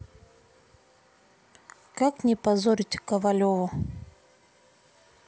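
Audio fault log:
No technical fault can be heard anywhere in this speech recording. There is no event here that needs a time entry in the log.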